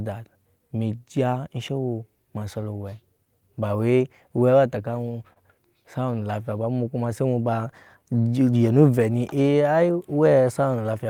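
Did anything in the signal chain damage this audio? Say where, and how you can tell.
Yes. At the network jitter-buffer stage, clock drift between sender and receiver is present: the sender's clock runs roughly 3% slow, so the buffer keeps draining and the receiver must keep compensating.

Repeated timing corrections run from 0.02 s to 11.04 s, slowing playback to 98% and adding about a third of a second of repeated material. On a waveform they appear as small duplicated segments at uneven spacing.

A short stall from a late packet occurs at 5.33 to 5.38 s. The receiver holds the last sound for 27 ms with nothing lost, which shows on a spectrogram as frozen, smeared harmonics.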